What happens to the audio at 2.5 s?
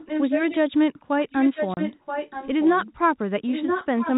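The far end's echo canceller has likely failed to remove what its microphone picked up from the loudspeaker, so a delayed copy of the speech returns. From 1.3 to 2.87 s, this echo leak trails the speech by about 0.98 s, roughly 10 dB quieter, and it is present at 2.5 s.

A filter in the chain is also restarted on every block, starting each one from silence, which fits a 512-sample buffer. Each block opens with a small transient, producing an 86.1 Hz tick-buzz under the sound at 2.5 s that rises and falls with its level.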